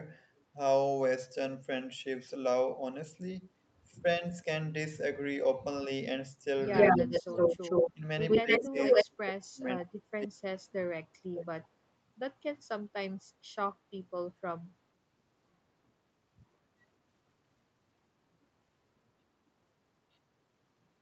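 Speech that dips and thins at 4.02–4.23 s, 6.93–7.33 s and 7.93–8.03 s, then fades out deeply through much of 8.42–11.69 s, is speech suppressed in double talk, likely an echo canceller ducking both sides at once. A 116 ms delayed copy, briefly louder than the talker, appears at 6.71–7.92 s and 8.28–9.05 s, with faint scraps at 9.88–9.92 s and 11.63–11.68 s: likely echo leak from a loudspeaker whose echo was incompletely cancelled.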